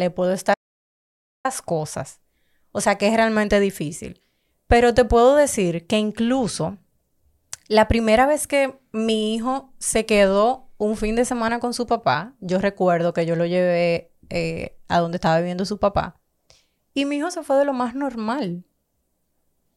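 At 0.54 s the speech cuts off abruptly into an audio dropout to silence lasting about 0.9 s, until 1.45 s. The gap holds pure silence with no room tone, likely because the input signal was lost while recording continued, so that stretch of speech is missing.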